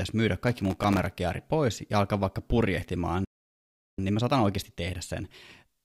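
From 0.48 to 1.12 s, processor overload crackle tears through the speech. Dozens of very short buffers missed their deadlines. Each left a tiny hard-edged silence, heard together as grit.

At 3.25 s the speech halts. This playback stall lasts about 0.74 s, until 3.99 s. The player likely ran dry or was blocked.

From 3.99 s to the end, time-compressed catch-up plays the speech 1.1 times faster at normal pitch. Small pieces are cut and cross-faded.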